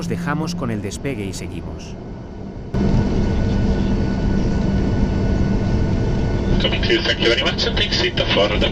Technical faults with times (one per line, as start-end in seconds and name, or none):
1.36 dropped buffer (overrun)